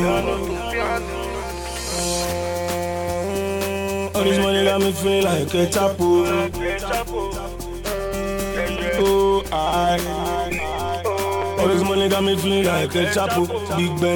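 No technical faults can be heard anywhere in the clip.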